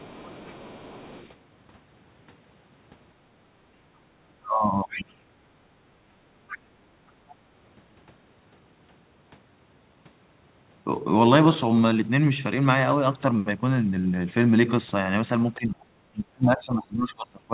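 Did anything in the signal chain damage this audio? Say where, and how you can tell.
Yes, the call processing stage, specifically the echo canceller, left three kinds of damage on this speech, heard through a call path whose G.711 coding confines everything below 4 kHz.

Other side's voice leaking through: a second voice sits under the talker from 0 to 1.29 s, then in short scraps at 4.89 to 5.02 s, 6.48 to 6.58 s and 7.30 to 7.35 s, roughly 15 to 30 dB below the speech. This is likely residual echo the canceller failed to subtract. Unlike room reverberation, it is a separate voice with its own timing, not a smeared copy of the talker.

Background gated by the echo canceller: the room tone dips by about 12 dB from 3.29 to 3.44 s and about 10 dB from 6.71 to 6.83 s, each time recovering within roughly 100 to 150 ms. The canceller's suppressor clamped the microphone while the loudspeaker was active. 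A network dropout would cut to silence and might glitch, whereas here only the background sinks and then returns.

Speech suppressed in double talk: from 4.45 to 5.19 s the talker's own voice sinks by roughly 25 dB, overlapping the leaked voice at 4.89 s. From 15.56 s to the end it is pushed down by around 30 dB. The likely cause is the canceller mistaking overlapping talk for echo and attenuating both. Unlike gating, this strikes the foreground speech itself, not just the room sound.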